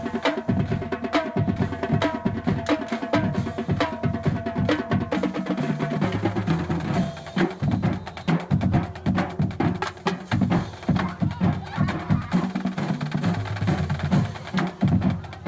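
Nothing is technically wrong with this audio, which has come through a WebRTC call path working normally on the G.722 codec, with the expected absence of content above 8 kHz.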